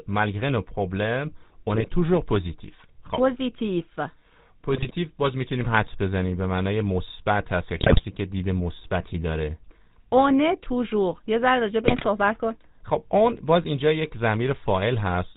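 Throughout, the GSM full-rate codec gives the speech a buzzy, gravelly roughness with nothing above 4 kHz, which fits the old 13 kbps coder rather than plain band-limiting. GSM bit errors break in at 1.71 to 1.87 s, 4.74 to 4.96 s, 7.76 to 8.05 s and 11.84 to 12.07 s. Corrupted decoder values produce squawks, pops and gargling rather than the silent gaps of dropped packets.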